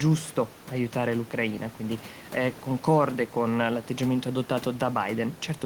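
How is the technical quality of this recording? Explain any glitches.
No glitches turn up anywhere in the recording, and the only thing beneath the speech is the room's own background noise, sitting about 20 dB below it, which belongs to the space around the microphone rather than to any fault in the system.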